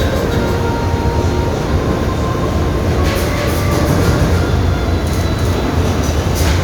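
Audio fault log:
throughout, doubled audio track. Every sound arrives twice. A second full-band copy trails the first by roughly 300 ms, about 5 dB quieter. It carries no decay and no room colour, so it is not an echo from a space. It is a clean, fixed-offset repeat. The likely cause is the same signal reaching the mix a second time through a slower capture path, or an edit that left two copies out of step.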